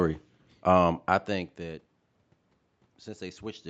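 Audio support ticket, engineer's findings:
No system fault found in the speech. Audio tops out at about 8 kHz, consistent with the call path's Opus bandwidth; a level shift near 1.0 s is the talker moving, and room noise sits underneath.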